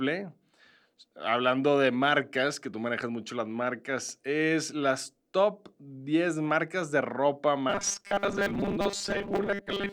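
New audio is likely arriving too seldom from about 7.70 s, right after "marcas de ropa", to the end at 9.92 s, so the playback fills the gaps by looping the last 5 ms over and over and skips most of the real signal. That fixed repeat forces a 200 Hz pitch onto the speech, giving robotic sound from repeated short buffers: a rigid, metallic buzz that only roughly tracks the words.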